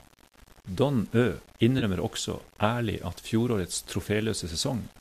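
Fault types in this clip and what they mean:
Low bit depth without dither: Quiet passages turn gritty, with grain that tracks the speech, likely from 8-bit rounding without dither. The error sits roughly 30 dB below the signal. On a spectrogram it appears as broadband haze following each syllable, and the waveform shows visible steps.
AAC frame loss with concealment: At 1.79 to 1.84 s, about 30 ms of audio is missing, and the decoder patches it from the last good spectrum. It sounds like a brief smeared, noisy blur. A spectrogram shows smudged, structureless energy replacing harmonics, and the waveform looks disordered there.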